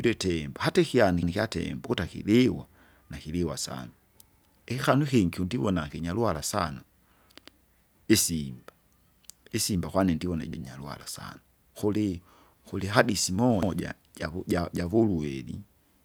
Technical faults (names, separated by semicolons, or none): overlapping chunks